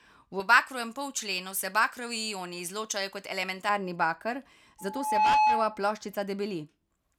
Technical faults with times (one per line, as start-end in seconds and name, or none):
0.40-3.69 pre-emphasis left on
4.78-5.87 loudspeaker feedback squeal